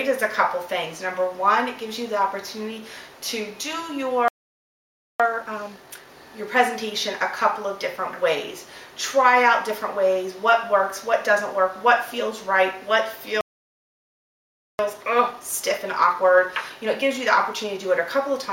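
At 4.28 s the sound cuts out in mid-flow. Silence holds for about 0.91 s, until 5.20 s. This is a playback stall. The player likely ran short of data or had its output thread blocked. From 5.20 to 6.10 s comes a time-compressed catch-up. The player drops small slices and cross-fades the joins to clear its backlog. The sound runs at twice normal speed but keeps its pitch.

At 13.41 s a second playback stall silences the output for about 1.38 s, to 14.79 s. A gentler catch-up follows, from 14.79 to 17.79 s, at 1.1 times speed. This hurry is slight but lasts longer. The same cut-and-splice process runs as the backlog drains.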